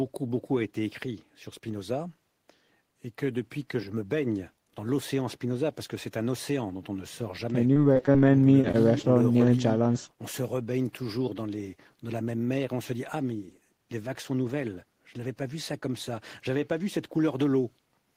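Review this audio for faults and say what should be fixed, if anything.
Repeated packet loss (robotic sound), 7.73 to 8.16 s: the network dropped or delayed packets six times in under half a second, with the longest gap 22 ms. The receiver patched each hole by extending the previous sound, so about 100 ms of real audio is replaced by fill, roughly a quarter of the stretch. The speech turns choppy, with small pieces missing. Prevention: improve the network path or add forward error correction so that bursts of loss can be recovered rather than concealed.

Jitter buffer slow-down, 8.10 to 8.48 s: overlapping the end of that burst, the receiver's buffer ran low and rebuilt its reserve by repeating short pitch periods. This adds about 37 ms and plays the audio at 92% speed with the pitch unchanged, so sounds come out slightly drawn out and lazy. Prevention: hold a somewhat larger steady buffer target on this link so that the buffer does not have to refill in the middle of speech.

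Short concealed packet loss, 8.61 to 8.65 s and 9.02 to 9.05 s: each time about 20 ms of audio never reached the decoder. The receiver continued the preceding sound across the hole, using 22 ms and then 15 ms of fill, and blended back in. The result is a brief smear or wobble, and a short consonant at either point may be lost. Prevention: use packet redundancy or in-band FEC so that isolated losses like these can be rebuilt.

Short stall from a late packet, 8.71 to 8.76 s: a packet arrived after it was due, and the buffer emptied. The receiver stretched the last sound by 23 ms until the packet arrived, then carried on from the same place. Nothing is missing, but one sound is held a little too long, and the delay stays about 23 ms higher afterwards. Prevention: reduce jitter on the path or raise the buffer's safety margin during unstable periods.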